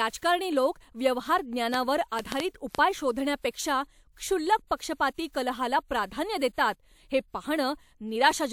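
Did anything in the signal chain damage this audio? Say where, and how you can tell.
Yes. Right after "लोक व्यवहार", from 1.74 to 2.76 s, there's a train of clicks: around five unevenly spaced pops, about 20 dB above the speech. That's likely analogue-side interference, a bad connection or a supply fault.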